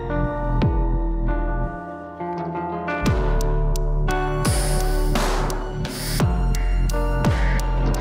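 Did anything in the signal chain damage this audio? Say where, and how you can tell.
No, nothing in the chain audibly damaged this audio; I can't point to any stage, from capture through playback, that left a mark on it.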